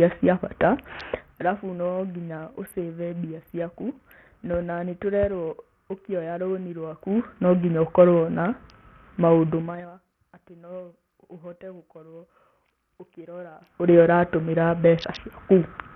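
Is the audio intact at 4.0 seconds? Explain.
No. At 4.0 s, as throughout, the speech carries heavy Bluetooth SBC compression damage, likely from a starved bit pool consistent with roughly 48 kbps. The upper sub-bands get almost no bits, so the treble drops out and flickers. Coarse quantisation leaves gritty noise and aliasing.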